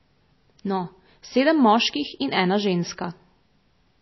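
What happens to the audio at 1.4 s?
At 1.4 s the speech sounds watery and dull, with nothing above about 5.8 kHz, a damage that runs through the whole clip. It likely comes from MP3 compression at a low bitrate, near 24 kbps, where the encoder cuts the treble and lets weak frequency lines flicker on and off between frames.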